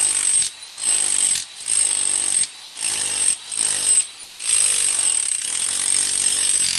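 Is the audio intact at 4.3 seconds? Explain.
No. From 4.23 to 4.39 s the sound is dropped by the voice detector: about 100 ms of sound gives way to 160 ms of steady comfort noise, likely because an Opus DTX detector mistook the sound for background and paused transmission.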